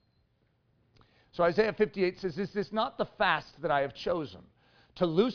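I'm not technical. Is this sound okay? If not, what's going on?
Yes, nothing wrong can be heard anywhere in this speech recording.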